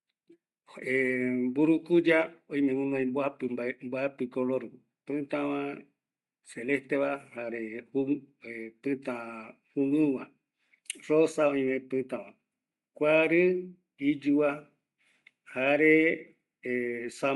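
From start to finish the speech carries plainly audible codec damage, a grainy, breathy edge where the upper spectrum has been replaced by shaped noise. This is likely Bluetooth LC3 compression, with the short-frame texture pointing to 7.5 ms frames at around 48 kbps.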